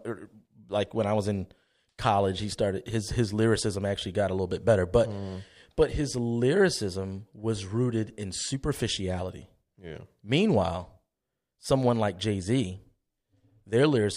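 No technical fault can be heard anywhere in the recording, and the speech signal stays steady and intact throughout.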